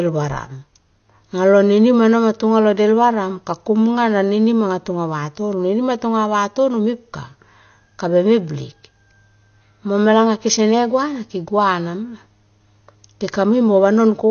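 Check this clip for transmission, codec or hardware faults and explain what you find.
One codec fault runs through the whole clip. The speech is dull and smeared, with nothing above 6.5 kHz. Sibilants sound fizzy and sustained sounds warble. The likely cause is AAC compression at a low rate, fitting roughly 32 kbps AAC-LC. The encoder quantises each frame's frequency lines coarsely against a hearing model. It discards the top band and leaves gaps elsewhere or fills bands with substitute noise. That damage is plainly audible.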